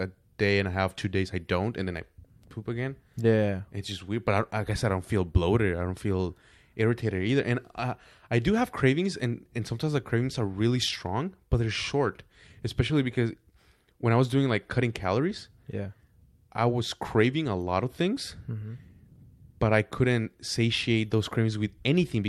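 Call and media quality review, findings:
Nothing stood out on listening to this speech recording.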